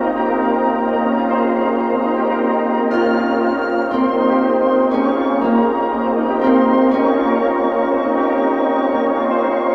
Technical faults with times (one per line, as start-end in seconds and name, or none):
none